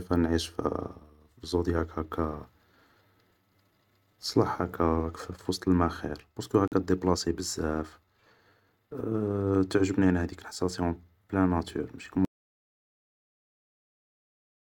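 A Bluetooth dropout at 6.68 to 6.73 s cuts a gap of roughly 50 ms into the speech. This is likely caused by packets missing their delivery window to the headphones. The output falls silent, then the speech resumes further along, as though it had kept playing.

An audio dropout to silence begins at 12.25 s and runs to the end of the clip. The speech stops mid-flow and gives way to silence with no room tone, likely because the input link failed while recording continued writing silence.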